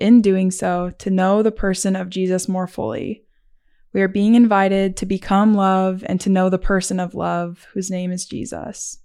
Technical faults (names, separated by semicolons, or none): none